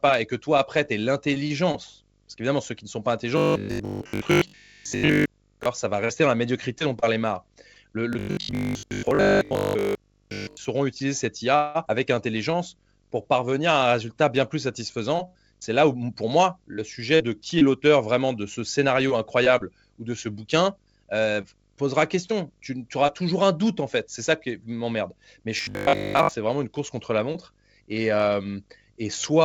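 From 3.38 to 5.66 s and again from 8.13 to 10.67 s, just before "utiliser cette", the speech turns into robotic sound from repeated short buffers. It has a rigid 50 Hz metallic buzz. The likely cause is audio arriving too seldom, so the receiver repeated 20 ms chunks and skipped most of the real speech.

From 11.56 to 11.77 s there is a call audio freeze. The jitter buffer likely ran dry, and the last sound was stretched into a 189 ms fill. Nothing is lost, but the delay grows by 189 ms.

From 11.85 to 11.88 s the speech skips ahead. About 150 ms is dropped, and the two sides are joined almost directly.

From 12.14 to 14.15 s, leading into "bien plus", a jitter buffer slow-down plays the speech at 92% speed with unchanged pitch. Repeated pitch periods add 167 ms, and sounds are drawn out.

From 14.66 to 17.75 s a jitter buffer speed-up runs the speech at 106% with unchanged pitch. Roughly 200 ms of short pieces are removed, and the speech sounds hurried.

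From 25.57 to 26.33 s, just before "vraiment une course contre", the same 50 Hz robotic buzz returns. Short repeated buffers likely replace most of the real audio.

Throughout, the 64 kbps G.722 call codec leaves nothing above 8 kHz.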